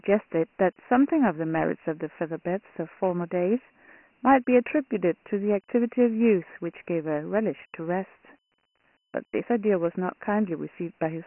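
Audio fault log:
Throughout: Dialogic VOX ADPCM. The speech is cut off above 3 kHz, well short of the telephone band, and a gritty, granular hiss rides on every syllable, rising and falling with the speech level. Each sample is coded as a coarse 4-bit step from a prediction, so the quantisation noise scales with the signal rather than sitting as a steady floor. The 3 kHz ceiling points to a 6,000-sample-per-second rate, which fits a 24 kbps stream.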